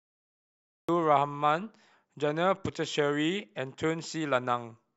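Cut-off start, at 0.89 s: the first 0.89 s is digital silence, and the speech then begins abruptly partway through a sound rather than rising from quiet. The recording or stream was evidently engaged late, so whatever came before that point was never captured. There is no natural attack and no fade-in; the signal steps straight from nothing to full level, which makes the opening sound clipped off and truncated.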